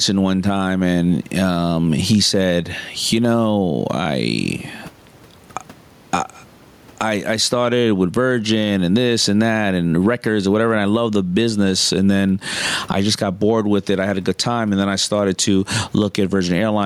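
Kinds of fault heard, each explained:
gain pumping: Throughout, the speech level swings by around 15 dB. Loud and soft parts sound squashed together. Likely cause: gain far too high, with a limiter pulling it down.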